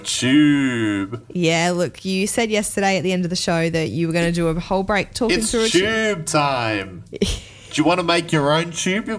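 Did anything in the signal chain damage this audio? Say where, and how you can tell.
No, nothing in the chain seems to have done any harm here; I listened for trouble at every stage and came up empty.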